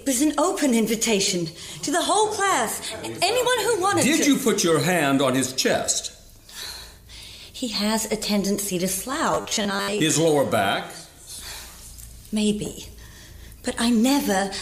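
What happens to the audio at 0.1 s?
Nothing goes wrong at 0.1 s; the audio plays through that moment intact, with no dropout, click or distortion.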